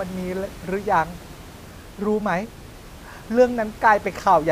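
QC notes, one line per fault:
No faults in the speech; the quiet room noise, about 20 dB below it, belongs to the recording.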